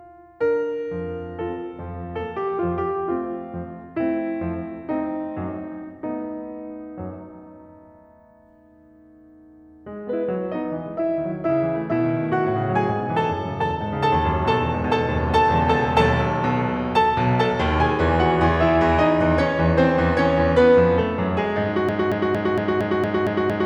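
At 21.89 s the music snaps into a broken-record loop: a fragment of about 230 ms plays back to back, exactly the same each time, eight times over, and it runs right to the end. That's the sound of a stall, most likely in the player, encoder or stream, where the last chunk it held just keeps getting resent. Whatever music belonged in those final seconds is simply gone.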